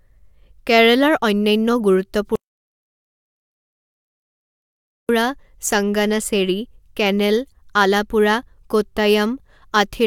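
Audio dropout to silence from 2.36 s to 5.09 s, a 2.73 s gap. The speech cuts off mid-flow into complete silence with no room tone, then resumes. The input signal was likely lost while the recorder kept writing zeros, so that speech is gone.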